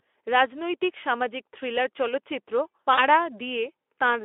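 VoIP packet loss concealed by the speech codec affects this speech clip at 2.93 to 3.03 s. About 40 ms of audio went missing, which fits two lost 20 ms frames, and the Speex decoder stretched its last pitch and filter into a fading buzzy tone or coloured noise. The speech stays weakened until the decoder recovers.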